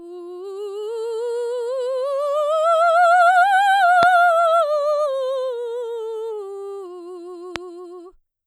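A music clip with two loud pops, at 4.03–4.05 s and 7.56–7.58 s. Each is a single sharp pulse peaking roughly 20 dB above the music, which continues underneath. The likely cause is a voltage spike from a connector, switch, static discharge or driver glitch.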